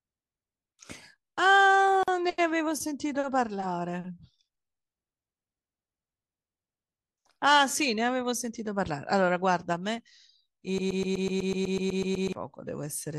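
At 2.03 s a gap at a join of encoded pieces opens in the speech: a gap of about 45 ms with smeared edges. Two separately encoded sections were butted together untrimmed, leaving encoder start delay and final-frame padding, and the sound resumes where it stopped.

From 10.78 s to 12.33 s a broken-record loop takes over: a 124 ms fragment repeats exactly, back to back, twelve times. This likely comes from a playback or stream stall resending its last buffer, and the speech that belonged there is lost.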